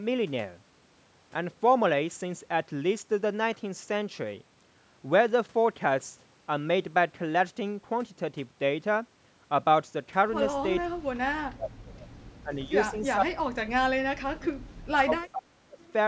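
Speech suppressed in double talk runs from 10.82 to 12.06 s, 12.43 to 12.73 s, 12.9 to 14.69 s and 15.03 to 15.83 s. The speech sinks, by as much as about 35 dB at first and about 30 dB later, with a milder dip of about 15 dB at 12.43 s, and breaks into pieces. This is likely an echo canceller that could not separate the talker from simultaneous far-end sound and turned everything down.

Echo leak appears at 12.97 to 13.01 s and 15.87 to 15.93 s as brief, faint scraps of sound about 30 dB below the speech, delayed by 455 ms. These are likely loudspeaker pickup that the far side's canceller failed to remove and sent back.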